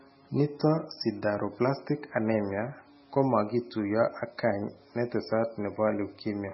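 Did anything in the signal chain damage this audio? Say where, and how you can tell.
Yes, heavy MP3 compression, likely at the codec stage, runs throughout. The speech sounds watery. A spectrogram shows nothing above 5.6 kHz, with flickering gaps that fit about 16 kbps.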